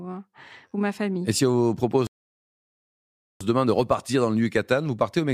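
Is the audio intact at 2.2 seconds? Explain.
No. From 2.07 to 3.41 s the speech falls silent, then resumes exactly where it stopped. It's a rebuffering stall: playback ran dry, adding about 1.34 s.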